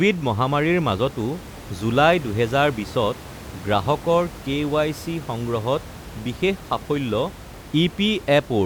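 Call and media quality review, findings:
No faults found in this speech recording. Room noise is audible underneath, sitting about 17 dB below the speech, which is part of the recorded environment.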